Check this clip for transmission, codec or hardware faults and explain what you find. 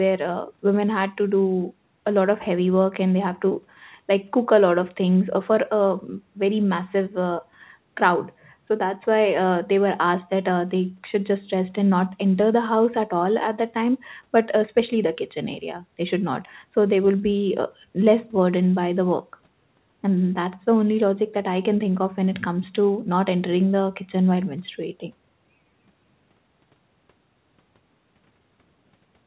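No transmission, codec or hardware faults can be heard in this speech. The sound passed through a call connection whose band ends at 4 kHz, which fits a narrowband telephone codec such as G.711.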